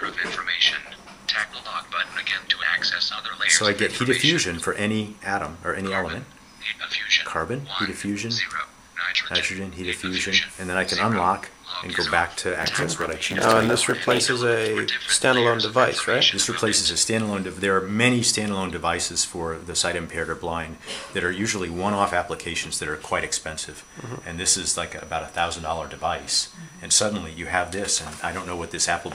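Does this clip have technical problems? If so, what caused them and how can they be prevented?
Yes. From 12.59 to 14.25 s, a block size mismatch (padded) zero-fills each block, causing a 91.9 Hz buzz and playback at 0.919 speed. Matching block sizes between stages prevents it.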